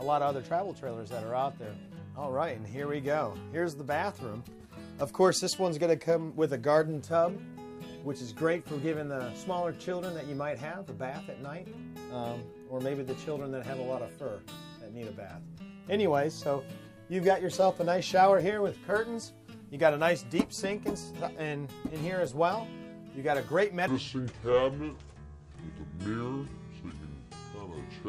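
From 23.88 s to the end at 28.08 s, a section at the wrong speed plays at 0.653 times normal, likely from a mismatched clock, so the sound drops roughly seven semitones and drags. On a spectrogram, harmonics shift downward and features stretch wider in time.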